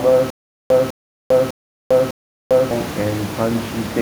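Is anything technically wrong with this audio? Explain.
Yes. From 0.30 to 2.71 s there is a stutter with silent gaps. A 203 ms burst repeats four times, with 399 ms of silence between. A stalled stream likely replayed its last fragment, and the speech in between is lost.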